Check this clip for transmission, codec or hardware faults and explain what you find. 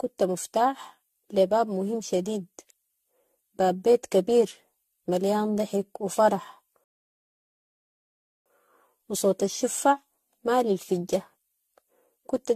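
Two problems stand out: the speech has a generation-loss sound throughout, and there's a playback stall in the middle.

Generation loss runs the whole way through. The speech sounds swirly, hollow and smeared, and consonant attacks blur. That's likely from being re-encoded around seven times, with each pass on a shifted frame grid stacking up fresh quantisation noise. The character points to AAC-LC at roughly 64 kbit/s.

The playback stall runs from 6.84 s to 8.46 s, a gap of about 1.6 s. The speech cuts off mid-flow, goes silent, then resumes. The likely cause is the player running dry on data, or its thread being blocked, so output halted until it recovered.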